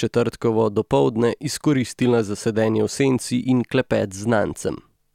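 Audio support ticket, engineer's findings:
No faults found on listening: the speech signal holds continuity throughout, with no audible defects attributable to any component in the chain.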